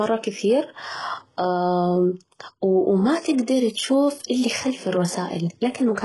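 From start to end the speech carries heavy codec damage, likely HE-AAC compression at a very low bitrate around 12 kbps: treble rebuilt from copied lower bands sounds gritty and lispy on s sounds. A spectrogram shows blocky, repeated upper bands and nothing above 11.5 kHz.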